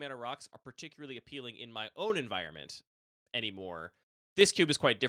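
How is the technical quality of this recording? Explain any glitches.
The recording has two level jumps. Microphone volume stepped up at 2.1 s, by about 8 dB, and again at 4.41 s, by about 4 dB: the call software judged the input too quiet and raised the microphone gain in single steps, so speech and background noise grow louder together, abruptly.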